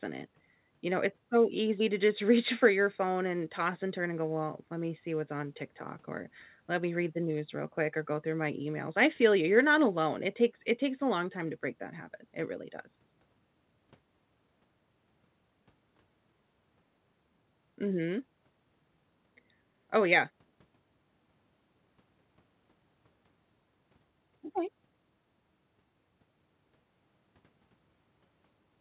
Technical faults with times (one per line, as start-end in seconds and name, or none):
none